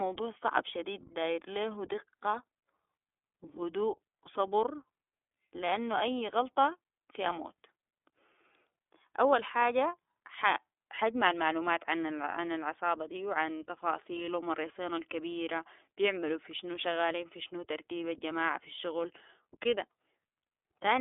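Throughout, the iLBC codec shapes this speech. Nothing passes above 3.7 kHz. Independently coded 30 ms frames, fitting the 13.33 kbps mode, leave it audibly rough and synthetic.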